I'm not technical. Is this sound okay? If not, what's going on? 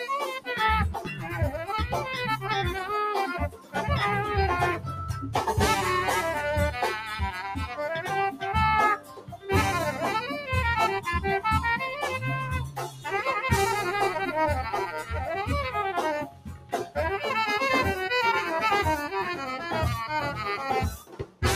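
No. A noise suppressor built for speech was left on for this sound, so it treats steady tones, ambience and lingering tails as noise and keeps turning them down. The level pumps and thins throughout, with quick onsets getting through, which sets it apart from a plain volume fade.

Six moments show the sound cut by the noise suppressor: 0.97–1.33, 3.49–3.76, 8.97–9.49, 12.67–13.07, 16.24–16.97 and 20.9–21.43 seconds. Each one sinks noticeably rather than vanishing, so these are not dropouts. The longest is near 16 seconds.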